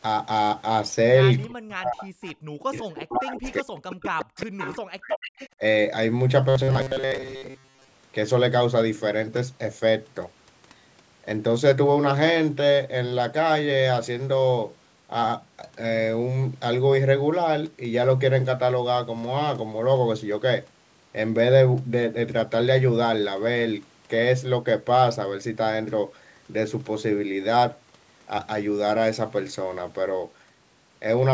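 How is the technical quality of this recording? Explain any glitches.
The first eight seconds of this speech recording have three kinds of fault, all typical of a call going through a speakerphone and a shaky network. The audio also carries the usual call microphone processing, with the lowest bass taken out.

Speech suppressed in double talk, from 1.44 to 2.26 s, from 2.6 to 5.19 s, and briefly at 5.56 to 5.61 s. The voice sinks away or drops out in chunks, with the level falling by around 40 dB at worst, and that's a lot. The likely cause is an echo canceller hearing both sides at once. It can't tell the talker from the loudspeaker echo, so it ducks everything.

Echo leak, at 2.22 to 2.34 s, 3.43 to 3.95 s, 4.37 to 4.75 s and 5.1 to 5.49 s. You hear a delayed copy of the voice trailing behind by 368 ms in the first three and 299 ms in the last. It gets louder as it goes, from about 25 dB under the speech to only about 5 dB under it by the end. 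That's likely a loudspeaker echo the far end's canceller didn't fully remove, which then got sent back down the line.

Robotic sound from repeated short buffers, from 6.49 to 7.91 s. The voice turns into a stiff, metallic buzz pitched at 133 Hz, though it still roughly tracks the speech. Most of that stretch is recycled audio rather than fresh signal. The likely cause is late-arriving packets, with the software looping the last bit of audio to fill the gaps. A 133 Hz buzz fits a loop of about 7.5 ms.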